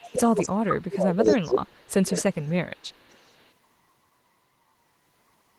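It's a speech clip with speech suppressed in double talk at 0.02–0.19, 0.53–1.95 and 2.2–2.68 s, where the voice dips by about 20 to 30 dB, likely because the echo canceller ducked everything while both sides spoke. There's also echo leak at 0.03, 0.26–0.49, 2.14–2.21 and 3.1 s: a copy arriving 255 ms late, roughly 15 to 40 dB under the voice, likely a far-end loudspeaker echo the canceller didn't fully remove.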